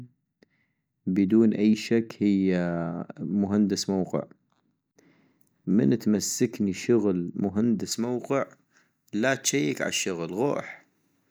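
From about 7.92 s to the end at 11.31 s, the speech has pre-emphasis left on: the treble lift was never undone, so around 10 kHz sits about 11 dB above 1 kHz, which fits a J.17 curve. It turns thin, bright and hissy on sibilants.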